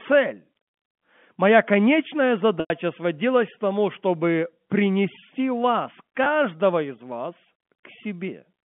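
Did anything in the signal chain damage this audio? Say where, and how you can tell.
Yes. Packet loss with pitch repetition occurs in the network stage at 2.6 s and 6.24 s. The receiver repeated the last pitch period to bridge each gap. The 20 ms loss before "из вас" holds as a buzzy tone. The 100 ms loss before "сводилась к тому чтобы" fades to silence, then cross-fades back.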